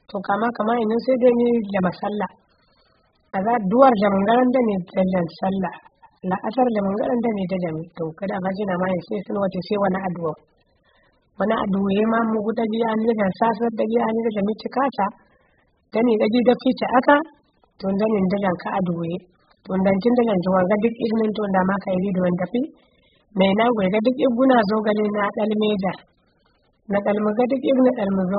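From start to finish the speech sounds dull and watery: nothing survives above about 5 kHz, and sibilants smear into a fizzy, warbling wash. That's most likely heavy AAC compression at a very low bitrate, with the coder dropping its cut-off and starving the upper bands.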